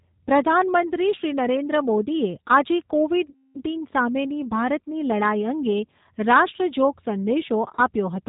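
Throughout, the G.729 codec leaves the speech rough and synthetic, with nothing above 4 kHz on a spectrogram, pointing to an 8 kbit/s stream. After "મોદીએ આજે", VoIP packet loss concealed by the speech codec runs 3.30–3.63 s as stretched sound that fades, then again briefly at 7.75–7.77 s, each showing as smeared harmonics and a shrinking waveform.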